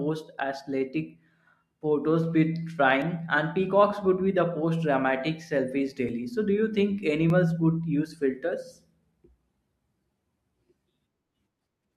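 A small jump in the speech at 3.02 s, 6.09 s and 7.30 s, likely dropped buffers (overrun): roughly 15, 5 and 5 ms of audio overwritten, edges spliced together.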